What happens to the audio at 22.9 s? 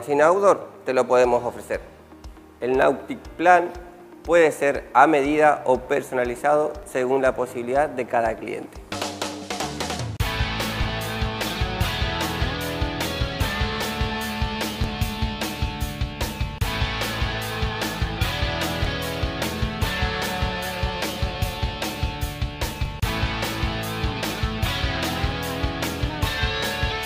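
At 22.85 s there is a brief click from overlapping chunks. The audio was handled in blocks about 4 s long, and here one block begins slightly before the previous one ended. About 6.5 ms of sound therefore plays twice at the join. That tiny repeat breaks the waveform's continuity, so it comes across as a sharp tick or a stutter rather than an audible echo.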